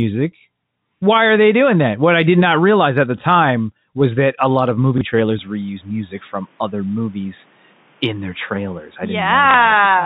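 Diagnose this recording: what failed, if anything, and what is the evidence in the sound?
Packet loss with last packet repeated, at the network stage: at 4.98 to 5.01 s, just after "that a lot of", and at 9.51 to 9.54 s, 30 ms of audio replays the last packet. The replay makes a small blip rather than the silent gap of a plain dropout.

From 5.39 s the band narrows to nothing above 3.8 kHz, with new background noise roughly 40 dB down and no gap or level jump. This is likely an input switched to a poorer device, not a codec change, because the tone and noise floor shift together.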